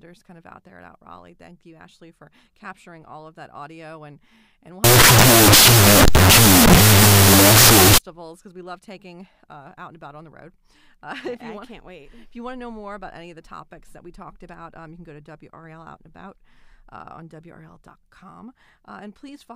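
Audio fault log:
4.84–7.98 s, wrong sample width: after "audio and and we'll", 16-bit audio is read as unsigned 8-bit, so bytes split into mismatched values; loud broadband hiss buries the speech, played at 0.5x speed and an octave low. Spectrogram shows a noise wall with faint smeared harmonics; waveform dense with noise until "because we love taking".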